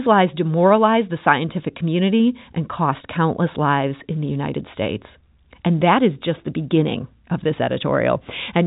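Nothing goes wrong anywhere in this speech, which comes over the ordinary G.711 telephone coding with its usual narrow band topping out around 3.8 kHz, so there's simply no fault to point to.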